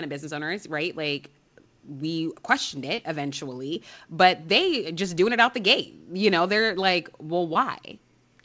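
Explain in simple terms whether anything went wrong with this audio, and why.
Something did go wrong, three times. Each is a short concealed packet loss. A tiny piece of the call, about 20 ms, arrived too late to play. The receiver covered each gap by stretching the sound just before it, then blended back in. You hear a brief smear or wobble. It happens at 2.96 to 3.00 s, right after "we questioned". It happens again at 3.74 to 3.77 s, just before "but they just doing". The last is at 7.53 to 7.57 s, after "know they're like". The call line itself carries nothing above 8 kHz.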